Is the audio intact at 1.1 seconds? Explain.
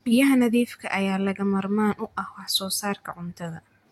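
Yes, the speech at 1.1 seconds plays through cleanly, with no dropout, click, distortion or other fault at that moment.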